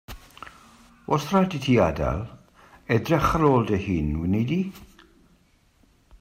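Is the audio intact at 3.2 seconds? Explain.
No. From 2.92 to 3.58 s the louder speech peaks carry a brittle crackle. This is hard clipping: the level runs about 2 dB past what the signal path can pass, so those peaks are sliced flat, adding harsh high harmonics.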